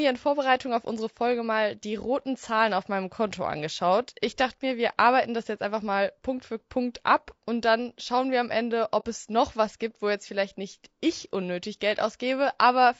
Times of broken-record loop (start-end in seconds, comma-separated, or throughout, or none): none